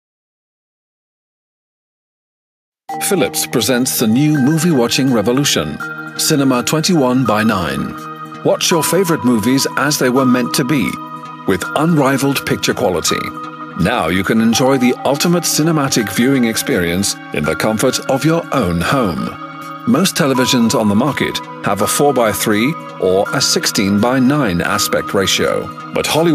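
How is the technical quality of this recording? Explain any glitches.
No audible glitches or faults.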